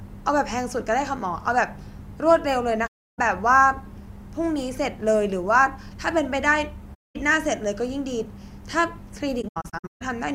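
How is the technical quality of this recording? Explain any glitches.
The recording has three gaps from AAC frame loss with muting. At 2.86 to 3.19 s about 0.32 s goes silent, at 6.94 to 7.16 s about 0.21 s, and from 9.41 to 10.02 s several short holes are scattered across 0.6 s, the longest roughly 150 ms. The decoder zeroes the missing frames, and the overlapping windows fade the speech out and back in, so each hole has soft edges. That distinguishes it from a hard dropout.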